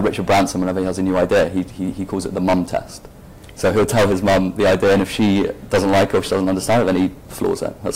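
Hard clipping runs throughout: about 20 dB of overdrive flattens roughly a tenth of the waveform's samples, smearing harmonics up the spectrogram and making every loud moment harshly fuzzy.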